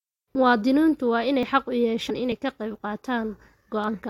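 At 0.35 s, and again at 1.43 s just before "xaq u" and at 2.32 s just before "ka qayb", the speech jumps ahead by roughly 20 to 30 ms. The likely cause is a dropped buffer (overrun): samples were overwritten before the program collected them. At 2.09 to 2.11 s, right after "xaq u", and at 3.87 to 3.88 s, compressed frames were skipped. About 100 ms of 23.2 ms frames went missing at each.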